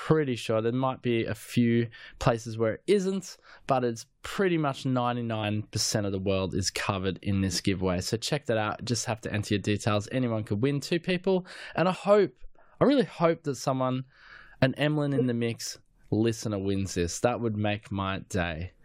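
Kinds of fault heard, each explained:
Compressed frames skipped: a few frames of the coded stream never got played, so the speech jumps ahead. Around 11.95 s roughly a tenth of a second vanishes, and from 15.15 to 15.25 s a shorter sliver drops out.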